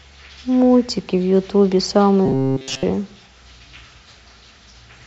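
From 2.26 to 2.85 s the speech becomes a metallic buzz at 133 Hz: robotic sound likely from repeated short buffers, each about 7.5 ms.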